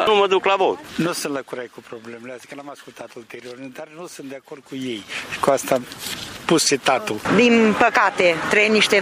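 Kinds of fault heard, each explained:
Zipper noise: from 4.56 to 5.38 s, a level change of about 20 dB arrives as roughly fifty unsmoothed steps per second, ticking audibly, unlike a clean fade.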